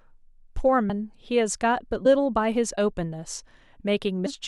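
At 0.88 s, 2.05 s and 4.25 s, compressed frames are skipped. The speech jumps ahead by about a fifth, a tenth, then a fifth of a second. Whole frames, which fit a 23.2 ms length, went missing or were rejected.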